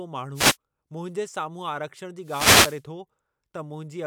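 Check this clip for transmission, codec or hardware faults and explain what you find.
Two wireless microphone noise hits break into the speech, at 0.34 to 0.57 s and at 2.22 to 2.82 s. The FM radio signal fades as reflections cancel, so receiver noise rises as a swish or burst of static over the voice, unlike a digital dropout's sudden silence.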